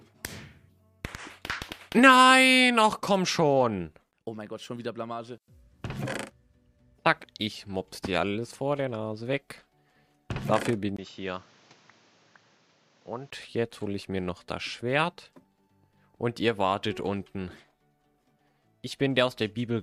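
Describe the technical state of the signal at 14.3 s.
The signal at 14.3 s is intact, with no fault audible at that moment.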